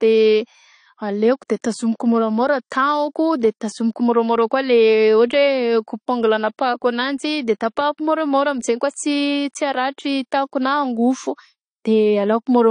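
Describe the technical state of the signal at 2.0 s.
At 2.0 s the speech carries AAC compression damage, present throughout the clip rather than at this moment alone, and likely caused by an AAC-LC encode starved of data. The codec band-limits the signal and spends scarce bits coarsely on each frame's spectrum, which fits a bitrate near 32 kbps. Nothing survives above 10 kHz, so the speech sounds dull, with a plainly audible smeared, warbling, fizzy texture on sustained sounds and sibilants.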